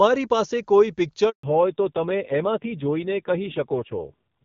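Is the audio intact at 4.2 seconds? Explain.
No. From 1.43 s to the end, a fallback to narrowband cuts everything above 4 kHz, and the rasp suggests a low-rate narrowband codec rather than simple filtering.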